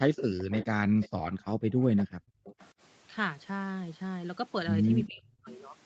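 From 0.16 to 0.65 s a faint echo leak trails the voice by about 0.39 s, about 15 dB down. It is likely the far end's loudspeaker leaking past its echo canceller. Brief repeats follow at 1.01, 1.97, 2.44 to 2.69 and 5.48 s, about 20 to 25 dB down. A spectrogram shows weaker copies of the speech harmonics offset to the right.

From 0.88 to 1.79 s and again from 2.08 to 2.44 s, the background is gated by the echo canceller. The room noise falls away by about 40 dB and then about 28 dB, for roughly 0.7 s and 0.3 s in total. On a waveform the noise floor collapses to near-flat stretches, and it shows as dark gaps in the spectrogram's background.

From 5.06 to 5.48 s the speech is suppressed in double talk, dipping by around 30 dB for roughly 0.4 s. The likely cause is the canceller clamping down while both sides spoke. The waveform envelope is visibly squeezed. Throughout, the spectrogram shows no content above 8 kHz.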